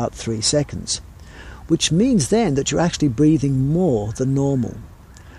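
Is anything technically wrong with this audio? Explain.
No, the signal shows no technical faults anywhere in the clip.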